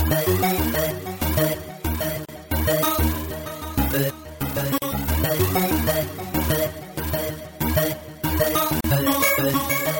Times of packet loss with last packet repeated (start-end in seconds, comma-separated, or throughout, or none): none